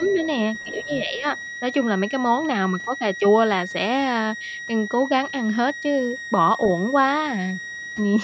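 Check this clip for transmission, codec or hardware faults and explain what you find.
Three faults are audible in this speech recording: a constant high whistle, brief stretches where the talker is turned down, and a second voice leaking in during the first second or so.

A switching supply whistle runs through the whole clip as a thin tone drifting between roughly 1.87 and 1.95 kHz, sitting about 15 dB below the speech. A switching power supply is running at an audible burst rate, or beating against another supply, and the pitch wanders with its load.

Speech suppressed in double talk appears from 0.0 to 0.2 s and again from 0.82 to 1.26 s. The talker's level dips by around 5 dB in short pieces, totalling roughly a tenth of a second in the first span and about a third of a second in the second. The likely cause is an echo canceller that could not separate the local talker from loudspeaker echo while both sides spoke at once, so it attenuated everything.

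The other side's voice leaking through is heard from 0.03 to 0.26 s and from 0.6 to 0.95 s as a faint second voice about 20 dB below the main talker. It overlaps both suppression spans, which points to the likely mechanism: the far end was playing on the talker's loudspeaker and the echo canceller left residual echo in the microphone signal. The call's normal microphone processing is also audible, with the band stopping at 8 kHz.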